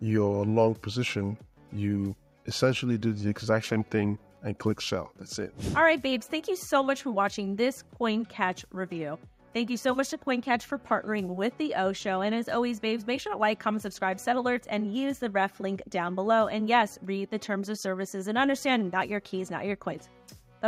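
Nothing is technically wrong with this audio.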